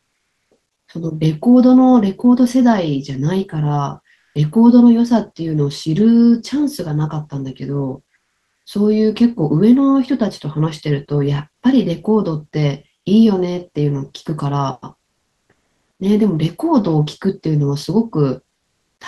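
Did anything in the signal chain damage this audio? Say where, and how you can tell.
Yes. Comfort noise in place of the background at 0.00–0.51, 4.13–4.35, 8.15–8.65 and 15.09–15.99 s: pause ambience turns flat and featureless, about 1 to 10 dB quieter. At the codec stage, likely Opus DTX halted transmission and the receiver synthesised noise.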